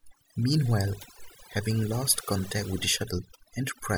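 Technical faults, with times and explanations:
Throughout, overdone noise removal: a noise reduction stage set too strong is cutting individual frequency bands down or out wherever they sit close to its noise estimate, taking quieter parts of the speech along with them, so the background drops and breaks up into twinkling specks.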